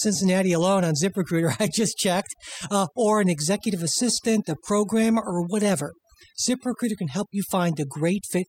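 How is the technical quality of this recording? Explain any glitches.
The technical quality is poor because of one fault that runs the whole way through. Overdone noise removal affects the entire speech recording. The noise reduction was set far too strong. Frequency bands near its noise estimate get pushed down or cut entirely, taking quiet parts of the voice too. Between phrases the background drops and breaks up into twinkling specks.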